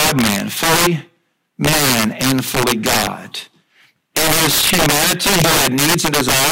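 Integer overflow runs through the whole speech clip. The signal is driven about 13 dB past full scale. The loudest peaks exceed the integer limit instead of being held at it. Those samples wrap around to the opposite extreme, jumping across the entire range in one step. Around 7 percent of samples are affected, all on the louder syllables. Each wrap is heard as a violent crack. These cracks are far harsher and sharper than ordinary clipping.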